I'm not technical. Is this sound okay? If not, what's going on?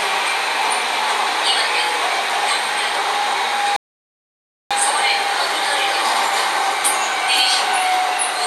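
No. At 3.76 s the sound stops dead for 0.94 s, a rebuffering stall, then resumes exactly where it paused: nothing skipped, unlike a dropout.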